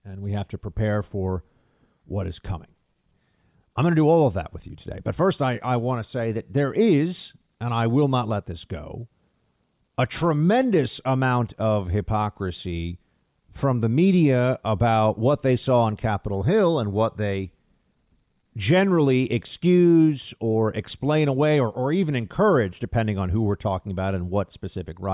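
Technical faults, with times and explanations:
No technical faults were found in this speech recording.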